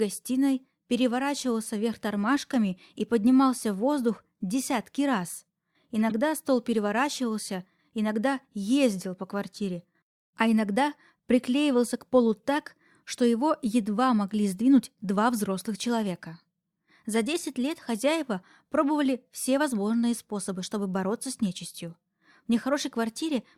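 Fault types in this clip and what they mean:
corrupt frame decoded: damaged compressed data got played instead of concealed, so energy lands at the wrong frequencies. You hear a short chirp, blip or burst of noise around 6.10 to 6.12 s, just before "стол переворачивался иногда ездил", and a similar one at 17.14 to 17.16 s.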